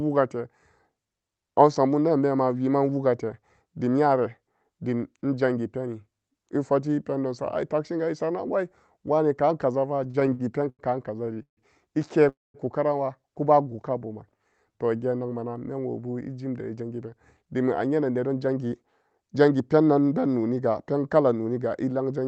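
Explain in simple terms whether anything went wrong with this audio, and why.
Several things went wrong, all from audio arriving unevenly over a call link, even though the speech itself is never cut.

Repeated stalls (stutter), from 9.97 to 10.82 s, just after "esaranan wai wene ka'an": the audio kept running dry and the receiver held the last sound seven times, about 0.2 s in total, the longest hold 95 ms. Unlike a single stall, this comes back again and again, so the speech drags and stutters.

A short stall from a late packet at 11.34 s: one piece of audio was late, so the last sound is stretched by 27 ms before carrying on. It is one brief held sound, not a repeated stutter or a true silence.

Call audio freezes, from 11.42 to 11.60 s and from 12.29 to 12.57 s: the held sound fades out, then goes quiet for 110 ms and 200 ms respectively. The likely cause is packets held up on the way. 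The silence sets these apart from the short stall, and nothing is lost because the speech resumes where it stopped.

Jitter buffer slow-down, from 13.70 to 14.97 s, between "karanwa kuba" and "geen nakma nan menwobu": the receiver repeated tiny slices to rebuild its reserve, adding 102 ms. The speech plays at 93% speed with unchanged pitch, so it sounds drawn out without any gap.

Jitter buffer speed-up, from 16.7 to 20.13 s, just before "be noniga pen kala": the receiver trimmed tiny slices, roughly 0.4 s in total, to cut excess delay. The speech runs at 111% speed with the same pitch and sounds hurried. This is the opposite of the slow-down.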